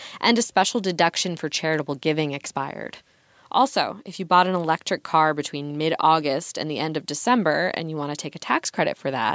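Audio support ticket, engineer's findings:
No audible faults found in the speech recording.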